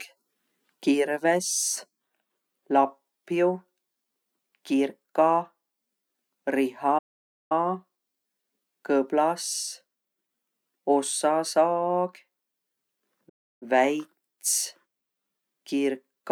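At 6.98 s the speech cuts off mid-flow and the output falls completely silent for about 520 ms, resuming at 7.52 s; a second, shorter dropout follows at 13.29 s, lasting about 320 ms until 13.63 s. Both are playback stalls, the likely cause being a player that ran short of data or had its thread blocked, so nothing reached the output until it recovered and carried on.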